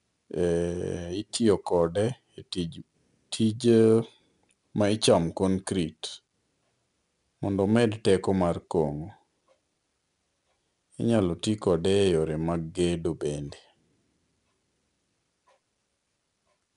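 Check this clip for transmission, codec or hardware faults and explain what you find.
There's one fault, and it runs the full length of the speech: 4-bit ADPCM compression. Each sample is coded as a coarse 4-bit step from a predicted value, with the step size adapting on the fly. That leaves a gritty hiss riding on every louder stretch, tracking the level, plus some roughness on sharp onsets where the step can't grow quickly enough. Nothing comes through above 10.6 kHz, which points to a sample rate near 22 kHz, so the top end sounds a bit dull too.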